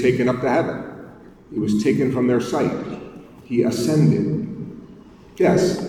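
No technical faults can be heard at any point; the signal stays continuous and steady throughout.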